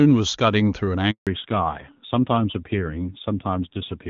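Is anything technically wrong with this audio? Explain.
Yes. There are two faults, one right after the other.

From 1.11 to 1.27 s there is a handover gap. While the call was being passed from one network to another, no speech frames arrived for 160 ms. The sound decays over a few tens of milliseconds and then drops to silence until the new link picks up, so whatever was said in that window is gone. On a waveform this shows as a flat stretch. On a spectrogram it is a blank vertical band across all frequencies.

From 1.27 s to the end there is a fallback to narrowband. Before the gap the call is carried as AMR wideband (HD Voice) and sounds clean, with content reaching past 4 kHz. After the handover the link has dropped to an older narrowband codec, which fits a move to AMR-NB at around 7.4 kbit/s. Nothing above 4 kHz survives, so the sound turns duller, boxier and rougher. A spectrogram shows the energy cut off sharply at 4 kHz from 1.27 s onward.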